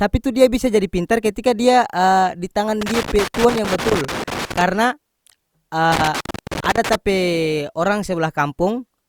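Loose connector crackle runs from 2.81 to 4.61 s and again from 5.92 to 6.95 s. A worn or dirty contact keeps making and breaking as it shifts, chopping the speech signal into an irregular, scratchy burst of crackle.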